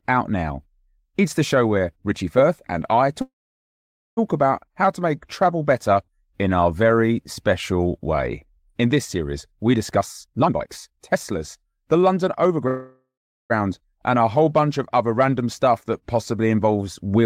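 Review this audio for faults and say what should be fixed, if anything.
A call audio freeze occurs at 3.21–4.19 s, after "and I", and again at 12.68–13.52 s, just before "and a". Packets were likely delayed, so the jitter buffer ran dry. The speech stalls into a fading tail and silence, then resumes intact.

A jitter buffer speed-up runs from 9.95 to 12.65 s, after "this series we". Repeated pitch-period cuts remove roughly 0.7 s, so the speech runs at 128% speed with unchanged pitch.

Fix the network path's delay spikes and bursts so packets arrive evenly and the buffer neither empties nor overfills.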